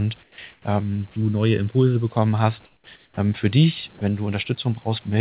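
From 0.23 to 0.38 s and again from 0.53 to 0.65 s, the pauses turn into a flat, featureless hiss about 8 to 9 dB quieter than the room, likely comfort noise in place of the background, synthesised while transmission halted.

From 0.83 to 2.09 s the speech sounds hollow and phasey, with fixed notches starting around 700 Hz. This is channel delay (comb filtering), where one channel lags by under a millisecond before mono summing.

The same smooth, lowered hiss returns from 2.66 to 2.87 s and from 2.96 to 3.17 s, dropping about 8 to 10 dB, again likely comfort noise in place of the background.

From 3.98 to 4.01 s a 30 ms sliver of speech vanishes into that steady noise, likely sound dropped by the voice detector, which mistook it for background.

Throughout, nothing is heard above 4 kHz, which fits a narrowband G.711 call path.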